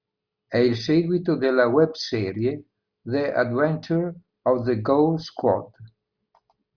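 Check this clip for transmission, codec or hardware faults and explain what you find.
Nothing audible in the speech points to a fault of any kind.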